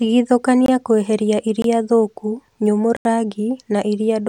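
Three sharp drop-outs break the speech: brief gaps at 0.66–0.68 s and 1.62–1.64 s, each about 21 ms long, then a longer audible hole at 2.97–3.05 s lasting about 85 ms. Each is a block of digital silence, where the sound cut out and back with no fade. The short gaps fit a missed 1024-sample buffer; the longer one matches four such buffers going unfilled in a row.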